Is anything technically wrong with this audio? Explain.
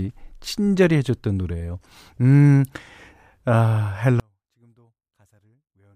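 Yes. From 4.20 s to the end, one channel is likely inverted, so the speech cancels in mono, dropping about 39 dB to a faint residue.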